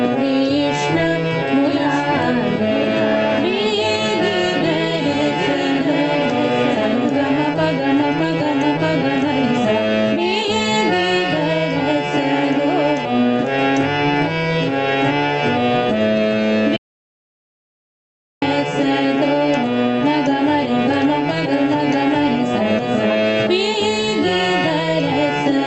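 Gain pumping runs through the whole clip: the level swings about 10 dB as loud sounds pull it down, likely from an overdriven input feeding a fast limiter. The waveform shows a flattened, breathing envelope. From 1.64 to 7.44 s a doubled audio track appears: a full-band copy about a second behind and roughly 5 dB quieter, with no room colour, starting and stopping abruptly. It likely comes from a second, slower capture path, and the spectrogram shows each pattern repeated one second later. At 16.77 s an audio dropout to silence cuts the sound to silence, with no room tone, until 18.42 s. The 1.65 s gap is likely a lost input and shows as a flat line in the waveform and a blank band on the spectrogram. Throughout, the call path's codec limits content to about 8 kHz.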